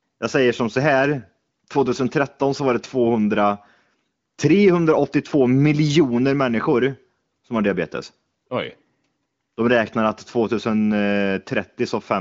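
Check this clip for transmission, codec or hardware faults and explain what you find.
No faults detected here.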